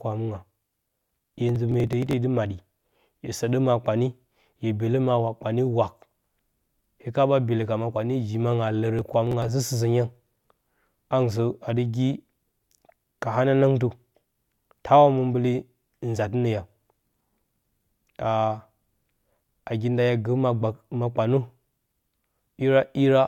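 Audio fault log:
1.49–2.13 s and 8.99–9.49 s, processor overload crackle: two bursts of gritty, tearing crackle ride on the speech and stop once each passes, the first lasting about 0.64 s and the second about 0.5 s. The processor is falling behind and missing a run of buffer deadlines. Each missed buffer is skipped entirely, leaving a tiny hard-edged gap. The closely packed clicks suggest very short buffers of around a millisecond and a half, with about 15 lost in the first burst and about 10 in the second.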